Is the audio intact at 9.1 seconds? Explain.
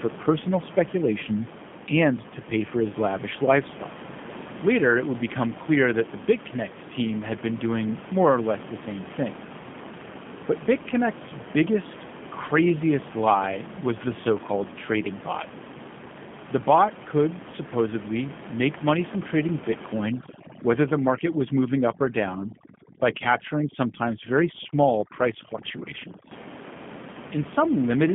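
No, not at 9.1 seconds, and not anywhere else in the clip either, because the G.729 codec damage runs the whole way through. The speech is rebuilt from a vocal tract filter, a pitch predictor and a handful of pulses per frame, which fits an 8 kbit/s stream. That's why it sounds plainly rough and a bit synthetic. The band is squeezed to roughly 150 Hz to 3.5 kHz with nothing above 3.7 kHz, and the room noise, sitting about 14 dB under the speech, warbles along with it.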